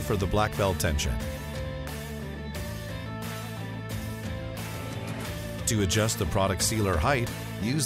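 Nothing here stands out as a technical fault; the audio just runs along without any dropouts, glitches or other trouble to point to.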